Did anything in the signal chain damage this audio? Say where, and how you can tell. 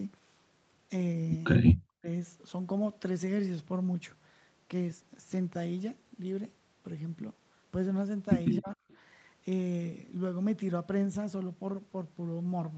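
Yes. At 1.72–2.09 s and 8.58–8.82 s the sound sinks sharply, by around 40 dB and then around 30 dB. This is speech suppressed in double talk, likely the echo canceller ducking the talker while the far side spoke. A network dropout would leave codec glitches, not a level dip.

At 8.9–8.97 s a faint, brief copy of earlier sound returns 294 ms late, about 35 dB below the speech. This is an echo leak, likely loudspeaker pickup that the canceller left behind. Unlike a reverb tail, it is a separate delayed repeat at a fixed lag.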